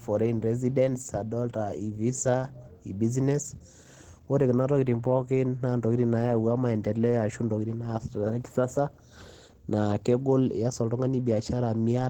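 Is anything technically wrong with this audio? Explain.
Yes. Throughout the speech, Opus compression is plainly audible, likely from hybrid-mode encoding at a bitrate near 16 kbps. Upper bands are rebuilt from folded lower content or noise, so the sound is hoarse, grainy and muffled. A spectrogram shows smeared, noisy texture up to 20.2 kHz.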